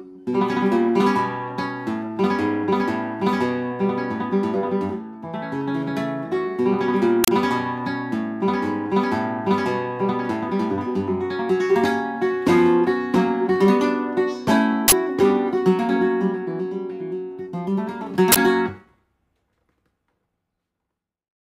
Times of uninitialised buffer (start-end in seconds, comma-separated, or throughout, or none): 7.24-7.28, 14.88-14.92, 18.32-18.36